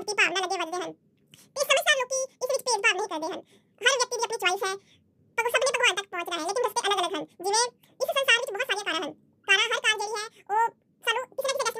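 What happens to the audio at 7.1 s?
At 7.1 s, as throughout the clip, the audio is read two samples at a time: pairs are consumed as single frames, so the speech runs twice as fast and an octave high.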